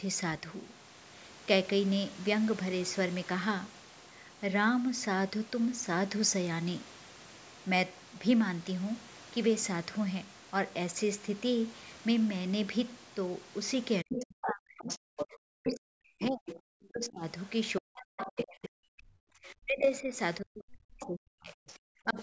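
From 14.03 to 17.24 s, and again from 17.79 to 22.18 s, the speech dips and breaks up in pieces, falling by as much as about 40 dB and losing around three seconds in each stretch. This is speech suppressed in double talk: the echo canceller likely could not separate the near talker from loudspeaker echo and attenuated both. Within those stretches, the other side's voice leaks through at 14.13–15.27 s, 15.67–15.78 s, 16.21–16.86 s, 18.18–18.64 s and 21.0–21.07 s. Most scraps sit only a few dB below the speech, and the fainter ones are well below it. Residual loudspeaker echo that the canceller likely failed to remove probably causes this. In the call's band-limited audio, with nothing above 8 kHz, it comes through as a second voice.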